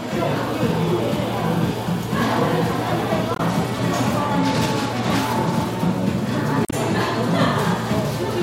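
Brief blips cut in at 3.33 to 3.40 s and 6.62 to 6.73 s: damaged data in a compressed stream, where corrupted bytes made the decoder misread frames and lose sync.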